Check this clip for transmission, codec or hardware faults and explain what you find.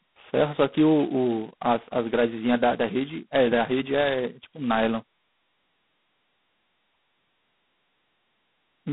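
The clip carries one fault from start to finish: heavy G.726 ADPCM coding.

Throughout, the speech has a harsh, rasping hiss that fits G.726 running at 16 kbit/s. At that rate each sample carries only about two bits describing its error against an adaptive prediction, so quantisation noise rises and follows the speech level. The band runs from about 150 Hz to 3.6 kHz, and a spectrogram shows nothing above 3.9 kHz. It also shows grainy noise filling the band under each syllable and dropping away in pauses.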